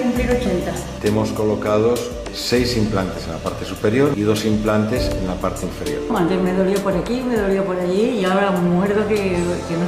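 No technical faults are audible anywhere in the recording.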